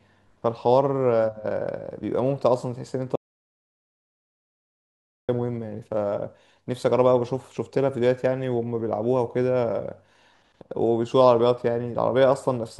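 At 3.16 s the input signal was likely lost, through a dropped device or link, while recording carried on writing silence. The result is an audio dropout to silence: the speech cuts off abruptly, the room tone vanishes entirely, and about 2.13 s is gone until sound resumes at 5.29 s.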